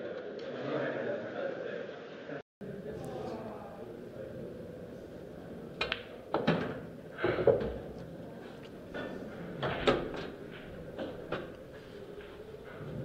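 From the start to 2.61 s the sound is dull and boxy, with nothing above 7 kHz and its own noise floor roughly 30 dB under the signal. At 2.61 s a 0.2 s silence breaks the sound, and it returns full-band and clean at the same loudness. This is likely an input switched to a poorer device. A simple low-pass filter or codec bandwidth drop would not bring a gap and a change of background noise at the switch.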